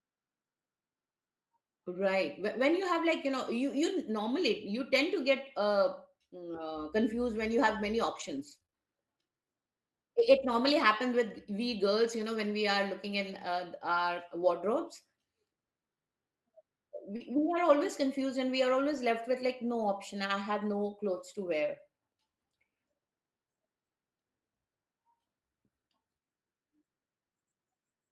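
At 3.37–3.39 s, a lost packet rebuilt from error correction: the next packet's low-bitrate copy filled it, leaving a brief rough, noisier patch rather than a gap. The spectrogram shows a slightly smeared, grainier slice. The same recovery recurs at 12.18–12.24 s and 14.40–14.46 s, after "looking in uh our".

From 8.15 to 8.74 s, after "when you have many", repeated packet loss gives a choppy, robotic stretch. Five gaps, the longest 22 ms, are patched by extending the previous sound, so about 15% of the span is synthetic. The waveform shows repeated, evenly shaped cycles and a striped, smeared spectrogram.

At 17.16–17.22 s, short concealed packet loss drops 40 ms, heard as a quick smear or wobble where the last sound is continued and blended back; it overlaps another error-correction rebuild at 17.20–17.26 s. A final rebuild at 18.92–18.98 s sits between "confused and we are" and "left with like no".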